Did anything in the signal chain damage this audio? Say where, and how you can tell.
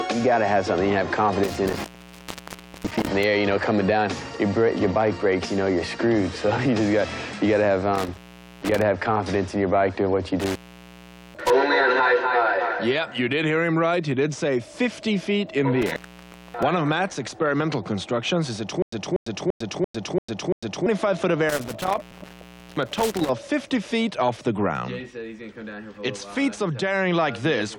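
Yes. The analogue wiring has an intermittent contact fault, heard as five dropouts with crackle at their edges. They run 1.44–3.24 s, 7.95–8.82 s, 10.40–11.50 s, 15.82–16.63 s and 21.49–23.29 s. Within each, the line stays open for roughly 1.01 s, 0.45 s, 0.79 s, 0.58 s and 0.76 s. A loose plug or cable breaks the connection, so the audio cuts out, and it clicks as the contact opens and closes again.

From 18.82 to 20.86 s there is a stutter with silent gaps. A 0.24 s fragment repeats six times, each followed by about 0.10 s of silence, so it returns every 0.34 s. The even spacing points to a stage after decoding, likely a player or stream stall. Each retry replays the last buffered fragment and then runs dry, and the audio that belonged in that stretch never plays.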